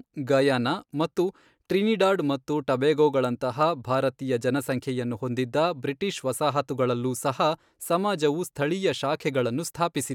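No technical faults can be heard anywhere in the recording.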